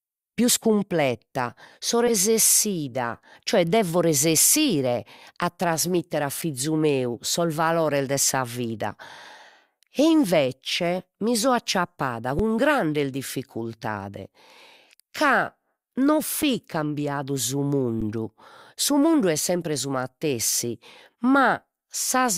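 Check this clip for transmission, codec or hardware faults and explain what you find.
Three faults turn up in this speech clip: one corrupt-frame fault early on and two short output dropouts later.

From 2.07 to 2.12 s there's a corrupt frame decoded, spanning roughly two frames. Flipped bits made the decoder rebuild energy at the wrong frequencies, so you get a brief burst of misplaced sound lasting about as long as those frames.

At 12.39 s and 18.01 s there's an underrun with held sample. The output buffer ran dry and the converter froze on its last value for 5.7 ms and then 10.7 ms, the second spanning 512 samples. Sound flattens abruptly, and about 5 ms and then 10 ms of live audio went missing.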